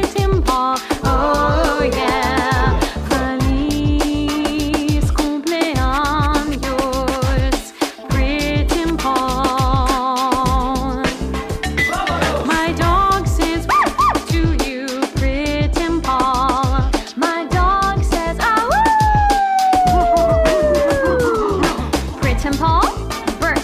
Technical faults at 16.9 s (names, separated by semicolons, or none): channel delay (comb filtering)